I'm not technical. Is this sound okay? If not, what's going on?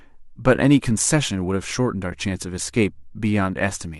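No. At about 2.11 s the speech briefly drops out, a tiny gap that fades out and back in. This is AAC frame loss with muting. A small piece of the compressed audio, likely carried by the low-delay AAC compression used for calls, went missing. The player filled that spot with silence, and the length of the gap fits one short chunk of about 10 ms being lost.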